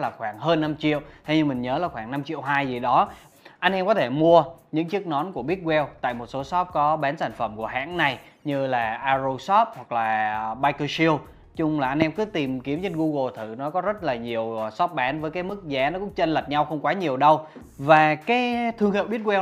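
Nothing goes wrong anywhere in this audio, so there's no fault to point to at any moment.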